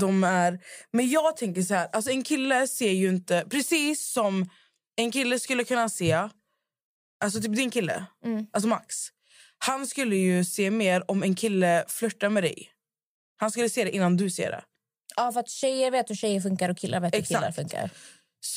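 Across the whole speech recording, no technical faults are audible. There is nothing in the signal path to report.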